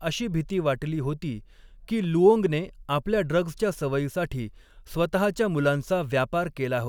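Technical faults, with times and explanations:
There are no technical faults to report in this speech.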